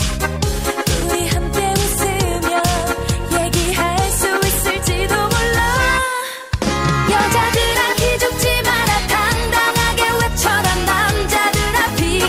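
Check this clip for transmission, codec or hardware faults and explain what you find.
Nothing in the recording points to a transmission, codec or hardware fault. The audio can be heard without any interruption or disturbance that would trace back to the signal chain.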